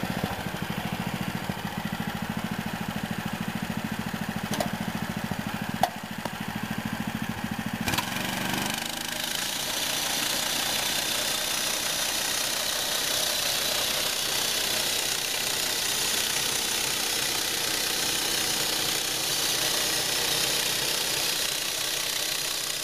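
At 1.72 s and again at 17.62 s the sound skips forward abruptly, losing a few tens of milliseconds each time, with the two sides butted together and no gap. This is audio missing between chunks, likely from a recorder working in 4-second blocks that drops a sliver at each handover. On a waveform the cycles jump discontinuously at the join. A spectrogram shows a hard vertical seam where the texture changes without any transition.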